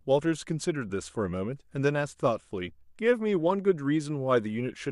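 No technical faults are audible anywhere in this speech recording.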